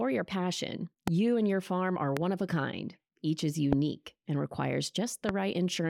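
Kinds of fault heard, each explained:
Loud pop: A brief voltage step or spike, likely from a switch, plug contact, static discharge or driver glitch, enters the signal chain and is shaped into a short pulse. Four single sharp pops, each roughly 20 ms long, land on the speech at 1.08, 2.17, 3.73 and 5.29 s, the first just after "your passion". The first two stand around 15 dB above the speech, the last two around 20 dB, with the speech continuing underneath.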